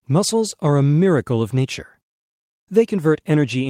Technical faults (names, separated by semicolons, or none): none